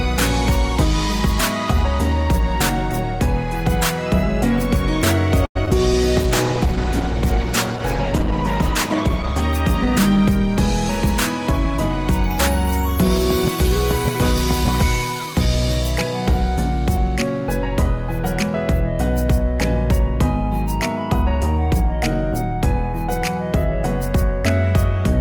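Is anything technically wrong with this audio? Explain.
Yes, three separate faults affect this audio.

Repeated packet loss (robotic sound) occurs from 5.45 to 5.73 s. Three holes open in quick succession, the longest lasting 98 ms. The receiver fills 117 ms of them by stretching out the last sound it had, and about 40 ms more simply drops out. Concealment covers roughly 42% of this short stretch, so it comes across as a brief choppy stutter with small pieces missing.

A call bitrate drop follows, from 6.19 to 9.49 s. The sender's bandwidth estimate fell, and the encoder was pushed to spend far fewer bits. What's heard fits a fall from 32 kbps to about 12 kbps, held at the bottom for roughly 3.2 s. At that rate the coding turns coarse and the upper frequencies are trimmed away. The sound becomes rough, watery and muffled until it recovers just before 9.5 s.

A jitter buffer speed-up runs from 13.51 to 17.41 s. 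Audio had piled up in the receiver's buffer beyond its target, so to cut the delay it removed short chunks, each one or a few pitch periods long, again and again. In total around 70 ms disappears, making playback about 2% faster at unchanged pitch. The effect is subtle, a slight speed-up across those four seconds.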